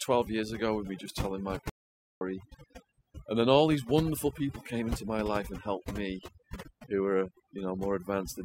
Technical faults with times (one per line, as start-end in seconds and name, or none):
0.00-8.44 overdone noise removal
1.69-2.21 audio dropout to silence